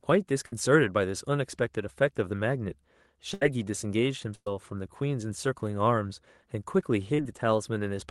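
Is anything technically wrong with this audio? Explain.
Yes. The speech has several dropouts typical of a call carried over a lossy network. The call codec's coding noise and its high-frequency limit near 12 kHz can also be heard.

Bursts of packet loss occur at 0.46 to 0.53 s, 3.34 to 3.42 s and 4.35 to 4.47 s. In each, a run of audio arrived too late or not at all. The receiver stretched the last sound to cover the hole and faded it down, so each one sounds like a brief held buzz or hiss. Then the speech jumps ahead. About 60, 70 and 110 ms of speech are lost. The longest fades to true silence for about 40 ms before the audio returns.

A short concealed packet loss follows at 7.14 to 7.19 s. About 40 ms never reached the decoder in time. The receiver patched the gap by extending the preceding sound, then blended back into the real signal. The result is a quick smear or wobble, not a clear break. 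A brief sound inside that window can simply disappear.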